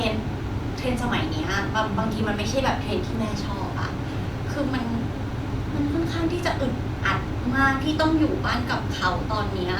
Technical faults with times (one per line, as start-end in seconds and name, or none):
none